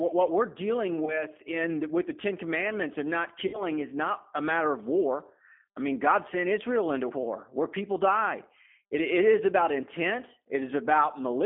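The speech runs through a G.729 codec for its whole length. The sound points to the 8 kbit/s G.729A variant, which rebuilds each short frame from a vocal tract filter, a pitch predictor and a few pulses rather than the original waveform. The band is held between about 250 Hz and 3.4 kHz, so the voice is thin and boxy, and the coding damage is plainly audible as a rough, synthetic edge.

VoIP packet loss concealed by the speech codec occurs twice. From 1.05 to 1.24 s about 20 ms of audio is missing, which fits a single lost packet. At 3.47 to 3.65 s about 60 ms is missing, which fits three packets in a row. Each time the decoder fills the gap by repeating its last pitch and filter at falling gain, so the sound smears into a buzzy tone or coloured noise that fades. Because each frame is built on the one before, the voice stays weak or distorted beyond the gap, to 1.24 s and 3.65 s.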